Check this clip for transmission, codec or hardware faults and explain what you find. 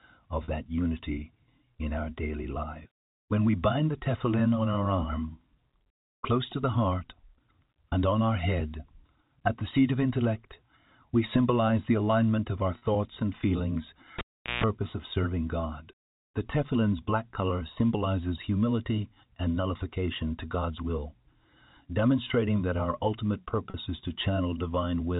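Two faults are audible: three short packet-loss repairs and one cable pull, all heard through a telephone-band G.711 path.

Packet loss with pitch repetition at 0.44, 12.78 and 23.7 s: each 40 ms gap, consistent with two lost packets, is filled by repeating the last pitch period. This gives a brief buzzy hold rather than a dropout or click.

Cable pulled and plugged in at 14.19 to 14.64 s: a pop, about 0.4 s of near silence, then about 0.15 s of 60 Hz mains buzz as the tip touches, and a second pop. The buzz sets it apart from a plain dropout.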